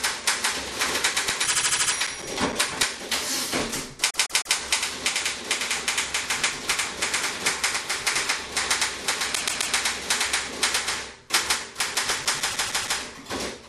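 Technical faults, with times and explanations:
0.99–2.98 s and 11.34–13.33 s, CD scratch ticks: each span holds a steady train of short ticks, about five or six per second, the longest around 7 ms. The rate matches one disc revolution per tick, so a single surface blemish is destroying more data per pass than error correction can rebuild. The player conceals the damaged samples, leaving brief clicks or micro-gaps that recur rhythmically.
1.45–1.93 s, 4.09–4.56 s, 9.34–9.73 s and 12.50–12.97 s, repeated frames: short blocks of compressed audio play back-to-back several times, producing a stutter. The first is a 78.4 ms block heard six extra times. The second and fourth repeat a 156.7 ms block three extra times, and the third repeats a 130.6 ms block three extra times. Each adds roughly 0.4–0.5 s of duplicated sound.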